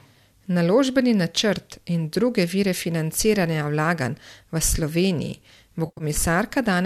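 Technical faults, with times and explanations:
5.86–6.04 s AAC frame loss with concealment: about 120 ms of audio goes missing in bursts spread over 140 ms, the longest gap running around 70 ms. The decoder fills each gap by reusing the last good spectrum, so the sound smears into a noisy, phasey blur instead of dropping to clean silence as a plain dropout would. The short bursts fit a dozen or so 10 ms frames, likely from the low-delay AAC-ELD stream.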